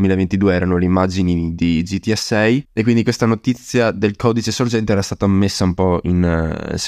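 Nothing in the recording stood out as a technical problem on listening.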